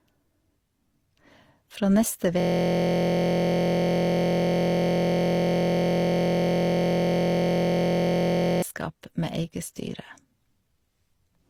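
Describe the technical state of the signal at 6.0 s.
At 6.0 s the signal is inside a system hang loop that runs from 2.40 s to 8.62 s. The machine has stalled, but the audio hardware keeps replaying the same stretch of its ring buffer. One slice of about 23.2 ms repeats hundreds of times, which fits a 1024-sample buffer. Because the slice is so short, it fuses into a steady buzz at about 43.1 Hz rather than a stutter.

Transcoding between lossy codecs also colours this moment, as it does the whole speech clip. The sound carries two overlaid sets of compression artefacts. Their character points to HE-AAC followed by Opus, each at a low bitrate around 32 kbit/s. That chain is likely the cause. The second codec spends bits re-encoding the first codec's damage and adds its own. Nothing is present above 20.5 kHz.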